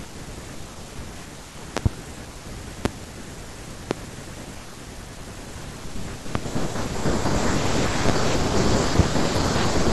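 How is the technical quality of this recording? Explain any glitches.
The recording has a recurring technical fault: seven loud pops, in six bursts, break through the speech. The first, from 1.77 to 1.89 s, is a double pop, two sharp clicks in quick succession. Single pops follow at 2.85 to 2.88 s, 3.91 to 3.94 s, 6.35 to 6.38 s, 8.09 to 8.12 s and 8.99 to 9.02 s. Each is a hard thump roughly 20 dB above the speech, which carries on underneath. The likely cause is sudden voltage spikes, from a loose connection, static or a driver glitch, that the following circuitry shaped into these brief bursts.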